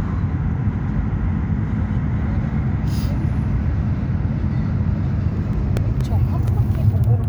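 From 5.53 to 6.72 s, six evenly spaced CD scratch ticks, about five a second, each only a few milliseconds long. A blemish defeats the error correction once per disc revolution, so the player patches or mutes samples. That steady rotational rhythm separates them from randomly timed vinyl clicks.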